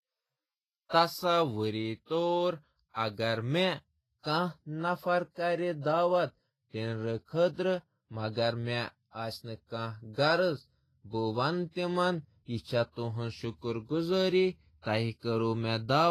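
The whole recording has a hissy, grainy top end, and nothing comes through above 14.2 kHz. That's likely Vorbis compression at a low setting, somewhere around 26 kbps. The treble gets quantised so coarsely that fine detail turns into noise-like fizz and consonants lose their edge. Then from 15.19 to 15.23 s there's a pre-echo: a short smear of hiss about 36 ms long just before a sharp attack. The codec spread the noise meant for the loud onset across the quiet moment ahead of it, so the attack sounds softened.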